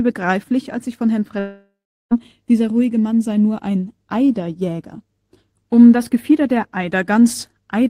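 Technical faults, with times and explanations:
1.39 to 2.13 s, long network dropout: the incoming speech stopped arriving for roughly 0.7 s, likely because packets were lost or delayed in transit. The receiver covered the gap by extending the last sound, which is heard as a buzz or hiss that fades away, leaving about 0.38 s of near-silence before speech resumes at "dieser ruhige". The stretch that never arrived, about 720 ms, is simply absent, so the speech jumps forward rather than picking up where it stopped.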